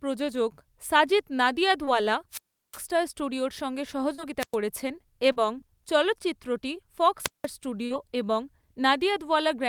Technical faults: short concealed packet loss; wireless microphone squelch dropout

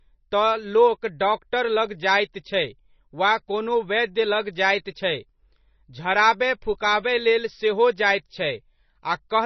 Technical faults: MP3 compression

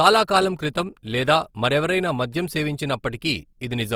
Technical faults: Opus compression

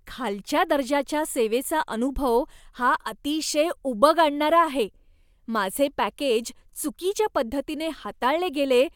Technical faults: none

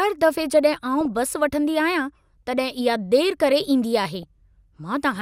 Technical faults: DAB burbling

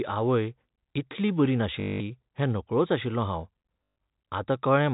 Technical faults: packet loss with last packet repeated

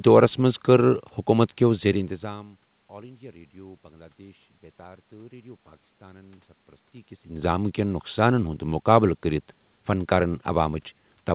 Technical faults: none

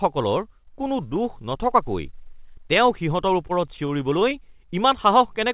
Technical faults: repeated stalls (stutter)

